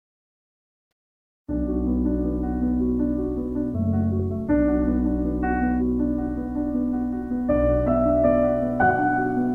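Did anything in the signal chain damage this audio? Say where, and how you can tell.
No, nothing in the signal chain has damaged this audio. At no point in the clip is there evidence that any stage, from capture through to playback, left a mark on the sound.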